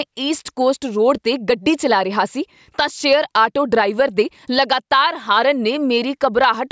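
Gain pumping is present throughout the speech: the gain swings roughly 10 dB as loud syllables pull it down, likely from excess gain driving a fast limiter.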